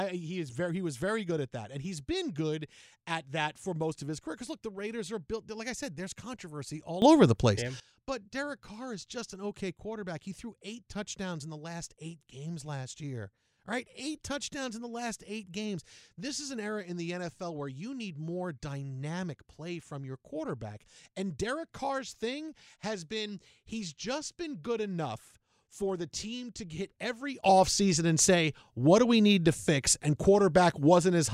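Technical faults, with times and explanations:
7.02–7.8 s, sudden gain jump: speech and background noise leap up together by about 16 dB, then fall back, likely a digital gain change applied between two samples with no ramp.
27.44 s to end, sudden gain jump: right after "team to hit every", speech and noise step up together by about 12 dB and stay raised, likely the same kind of unramped gain change.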